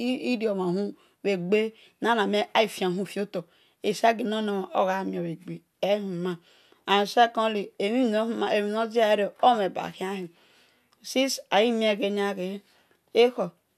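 No technical faults can be heard anywhere in the speech. Nothing in the signal stands out for comment at any point.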